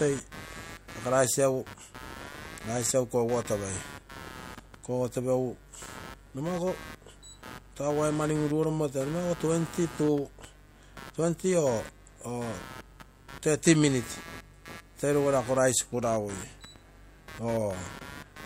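A speech recording with computer activity noise running the whole way through: a buzzy, chirping layer pulsing at around 150 Hz, sitting roughly 20 dB under the speech. It swells and fades on its own schedule, ignoring what the talker is doing. That's the giveaway. The processor, graphics card or mouse is changing load, which shifts the ground the audio circuit shares, so the machine's workload leaks straight into the signal.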